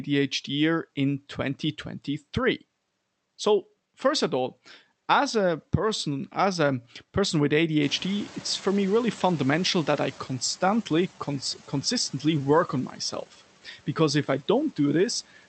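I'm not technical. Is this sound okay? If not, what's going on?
No. At 7.82 seconds, just after "as a person with", the room noise suddenly gets louder. The noise suppressor is slow catching up, so the noise comes through less reduced at first. It fades down by 10.23 seconds, about two and a half seconds later.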